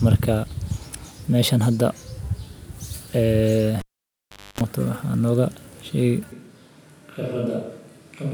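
At 3.80 s the cable is pulled and plugged in. A pop, about 0.76 s of near silence, then 0.27 s of 50 Hz buzz and a second pop at 4.61 s distinguish it from a plain dropout. From 6.32 s to the end, the speech abruptly turns roomy, hollow and thin, about 10 dB quieter with more background noise, likely a switch to a distant microphone rather than a gradual fade.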